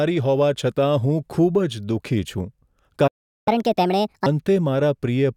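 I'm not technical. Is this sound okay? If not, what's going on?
No. At 3.07 s there's a playback stall: the speech cuts out for about 0.39 s, likely because the player briefly ran out of data. From 3.48 to 4.26 s comes catch-up at higher speed: it plays 1.5 times faster and sounds noticeably higher-pitched while it makes up the lost time, then settles back to normal.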